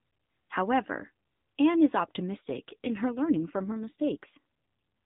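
From 2.38 to 4.38 s an AMR rate drop occurs: the link pushes the codec down to a lower mode, which fits a fall from 12.2 to about 5.9 kbps. With fewer bits for each frame, the speech turns rougher and more synthetic, with no gap or band change, until the higher rate returns.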